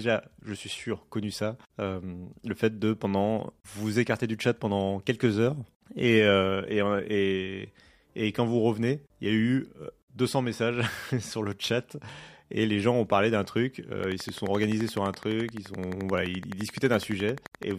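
A speech clip with a steady ticking that starts at 14.04 s, right after "ont parlé d'un truc", and runs to 17.72 s. It is a train of clicks, about forty of them at an even 11.7 per second, each much like the last and peaking roughly 5 dB above the speech. The clicks cut through the words and gaps alike. The likely cause is interference from nearby equipment or a faulty connection or power supply injecting repeated pulses.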